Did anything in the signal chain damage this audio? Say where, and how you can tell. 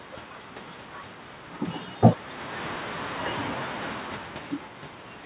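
No, the signal chain did no damage: the band stops at 4 kHz, which fits a G.711 mu-law call path; the room noise belongs to the recording; and the level shifts around 2 s and 4 s are the talker moving relative to the microphone.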